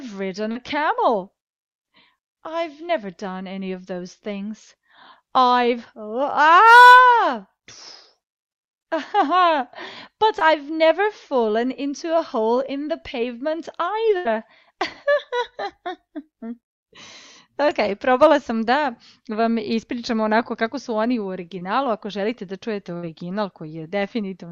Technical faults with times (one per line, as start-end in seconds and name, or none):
0.51-0.57 short concealed packet loss
10.39-10.43 short concealed packet loss
14.17-14.27 burst of packet loss
21.59-21.63 short concealed packet loss
22.97-23.05 burst of packet loss